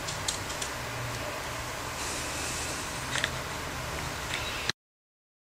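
Nothing in the audio stood out as a technical fault on listening.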